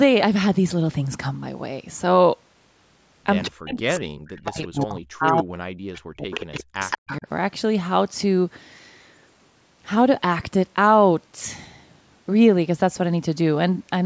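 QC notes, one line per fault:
3.45–3.5 s, 4.46–4.84 s, 5.94–6.0 s, 6.33–6.64 s, 6.81–7.17 s: echo leak. A copy of the speech returns 181 ms late, from roughly 30 dB down to about 10 dB below the speech and loudest near the end. This is likely a loudspeaker-side echo canceller not fully removing its microphone pickup.
3.49–7.27 s: speech suppressed in double talk. The talker's level dips and breaks up in pieces, dropping as far as roughly 40 dB, for around 3 s in total. This likely happened because the echo canceller, facing overlapping speech from both ends, attenuated the near-end voice along with the echo.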